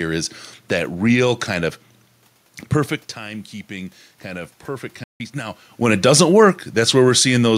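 Automatic gain rising, from 3.16 to 6.07 s: after the speaker's level drops by about 12 dB around 3 s, the gain control slowly adds about 4 dB, swelling voice and room noise together. A playback stall at 5.04 to 5.20 s cuts the speech to silence for 160 ms, likely because the player briefly ran out of buffered data.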